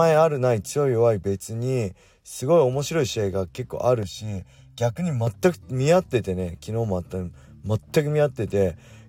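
From 4.03 to 5.27 s there's channel delay comb filtering: one side runs about a millisecond and a half late, so the mono sum goes hollow, notching from roughly 400 Hz.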